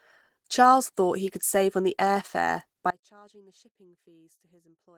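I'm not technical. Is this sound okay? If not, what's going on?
No. The speech was likely squeezed hard by Opus compression, a data-saving format, so the voice sounds hoarse and muffled throughout.

At 2.91 s, just after "on the air fare", an audio dropout to a faint residue occurs, likely because the signal was lost while the line stayed open. The voice cuts off abruptly, leaving only a faint sound to the end.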